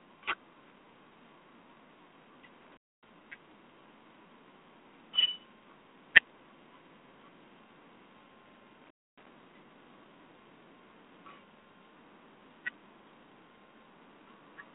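Throughout, G.726 ADPCM with few bits per sample, fitting 24 kbit/s, adds a harsh hiss that follows speech level, and nothing passes above 3.8 kHz.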